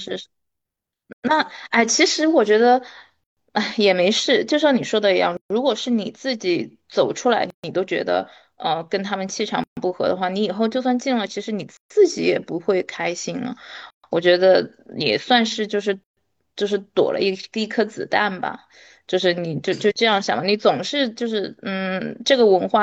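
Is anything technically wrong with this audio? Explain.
Yes. There are gaps at joins of encoded pieces at 1.13, 3.24, 5.37, 7.50, 9.64, 11.77, 13.90 and 16.04 s, one every 2.0 s of speech. Each is a silence of about 133 ms (110 ms for the first) with smeared edges, before the speech resumes where it stopped. The pieces were encoded separately and joined without trimming the encoder's start delay and end padding.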